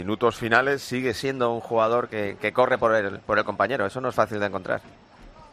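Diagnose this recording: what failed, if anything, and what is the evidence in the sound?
Wrong sample rate at the playback stage. From 1.23 s to 5.51 s the sound runs 1.09 times fast and sits about 1.5 semitones high. Speed and pitch shift together. That ratio fits 44.1 kHz material clocked out at 48 kHz without conversion.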